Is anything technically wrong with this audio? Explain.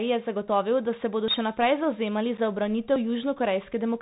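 Yes, there are several faults in this speech clip.

Throughout, the sound carries the plainly audible signature of a Bluetooth CVSD headset codec, consistent with a 64 kbps CVSD link. The codec sends one up-or-down bit per sample with an adapting step size, so fast, loud high-frequency movement outruns the step and distorts. Sibilants turn scratchy and a granular hiss sits under the speech. On a spectrogram, energy stops at a hard ceiling around 4 kHz, with a grainy noise floor beneath.

At 0.48 s, just before "da se bodo še", and again at 2.96 s, there is a sudden jump in the sound. This is likely a dropped buffer (overrun): samples were not collected before the hardware overwrote them, so roughly 20 ms vanished and the two sides were spliced directly with no silence. On a waveform this shows as a discontinuity where the cycle breaks abruptly. A spectrogram shows a thin vertical broadband line.

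From 2.37 to 2.39 s, just after "bodo še naprej zavzemali", there is unconcealed Bluetooth headset packet loss. About two voice packets between headset and phone failed, and 7.5 ms of audio was replaced by silence or an idle pattern rather than patched over. The result is a brief hole with hard edges. The waveform shows a flat gap with abrupt walls, and the spectrogram a narrow empty band.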